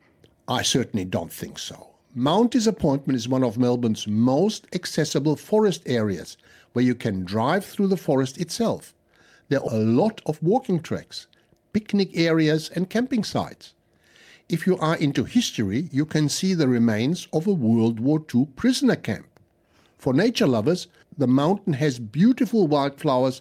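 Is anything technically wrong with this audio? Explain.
Yes, there are two kinds of fault, both from the receiving end of a packet audio path.

Skip ahead, at 9.67 s: roughly 0.4 s of speech is missing and playback jumps straight from the sound before the cut to the sound after it, with no fill or silence between. A stretch of audio was lost in transit or discarded when the jitter buffer overflowed while later audio was already queued. The result is an abrupt splice where part of the utterance vanishes and the delay drops by about the same amount.

Jitter buffer speed-up, from 10.23 to 10.62 s and again from 11.64 to 12.99 s: the speech runs fast at unchanged pitch, at 112% in the first stretch and 107% in the second. The buffer was holding more audio than its target, so the receiver trimmed short pitch-period-sized pieces repeatedly to bring the delay back down. Roughly 50 ms goes in the first stretch and about 100 ms in the second, and both sound hurried.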